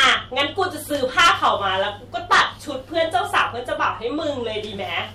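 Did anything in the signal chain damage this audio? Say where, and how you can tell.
Yes: hard clipping in the speech, from 0.00 to 0.63 s, 1.18 to 1.66 s, 2.32 to 2.43 s and 2.98 to 3.42 s. The level was driven about 9 to 10 dB past full scale in the first three stretches and about 5 dB in the last. A converter or sample-format stage therefore cut the peaks flat. The result is a harsh, crackling fuzz confined to those loud moments. Soft saturation would round the peaks and sound warmer. Codec artefacts would smear or warble rather than buzz only on peaks.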